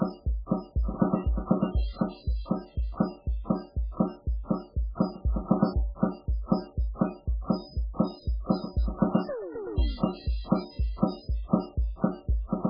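Music, and throughout its length it carries heavy MP3 compression damage, likely from encoding at a very starved rate that fits roughly 8 kbps. Nothing survives above about 5.2 kHz, so the top end stops dead, and the weak frequency lines left below that flicker in and out between frames, giving a watery, swirling texture with smeared attacks. That flicker sets it apart from a simple low-pass filter, which would dull the treble but leave the rest steady.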